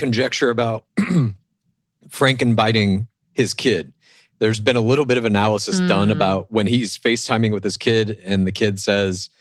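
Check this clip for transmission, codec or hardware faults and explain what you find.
No transmission, codec or hardware faults turn up in this speech clip.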